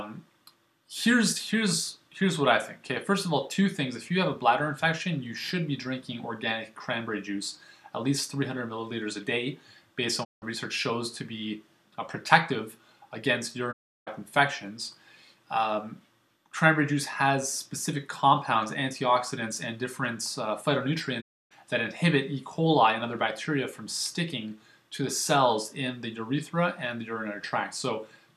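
Three digital broadcast dropouts, at 10.23–10.44 s, 13.71–14.09 s and 21.2–21.53 s: the receiver lost good frames and muted, fading out in 20 ms, with roughly 170, 340 and 290 ms of programme gone.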